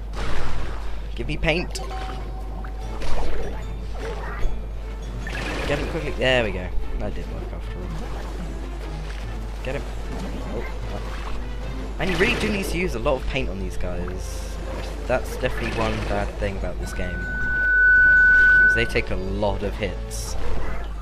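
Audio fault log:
16.83–19.09 s, loudspeaker feedback squeal: a single 1.5 kHz tone swells over about a second until it sits roughly 10 dB above the rest of the audio, then stops. The microphone is hearing its own loudspeaker, and at that one frequency the loop gain passed unity, so each trip round the loop reinforced it. A spectrogram shows one bright horizontal line at 1.5 kHz thickening as it rises, and the waveform envelope swells into a dense, steady block.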